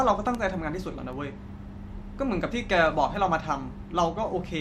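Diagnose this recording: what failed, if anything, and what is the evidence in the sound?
Bit error spikes tick sharply at 0.35 s and 1.13 s, peaking about -19 and -37 dBFS. Flipped bits in storage or a digital link.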